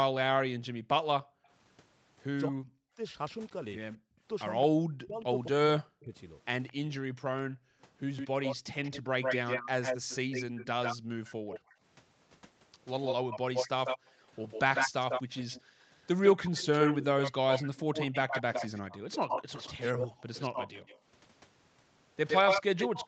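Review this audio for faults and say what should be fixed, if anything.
The room background gated by the echo canceller drops out four times: 0.57 to 1.48 s, 10.97 to 11.76 s, 14.02 to 15.83 s, and briefly at 20.1 to 20.2 s. In the first three, the background falls by about 40 dB for roughly half a second, or about 0.3 s in the third. The last dip is only about 20 dB and 0.1 s. Each time the far end plays, the canceller slams the mic down and the room tone vanishes, then pops back. Fix: use gentler suppression or comfort noise so the background doesn't pump.

Speech suppressed in double talk shows up twice. Between 2.48 and 7.5 s, the talker is knocked down hard, by something like 40 dB, in pieces adding up to around a second and a half. From 9.05 to 10.66 s there's a milder dip of roughly 15 dB, totalling only a fraction of a second. This is likely the canceller failing to tell the near talker from loudspeaker echo and ducking everything while both sides talk. 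Fix: tune double-talk detection so near-end speech isn't attenuated whenever the far end is active.

The echo leak runs from 3.49 s to the end. A copy of the voice comes back 147 ms late and sits only a few dB below the speech itself, so one voice is heard twice. That's likely a loudspeaker endpoint whose echo canceller isn't removing what its mic picks up, so the leftover is sent back down the line. The band-limit at 8 kHz is just the normal Opus call path. Fix: get the far end onto a headset or fix its echo canceller's delay alignment.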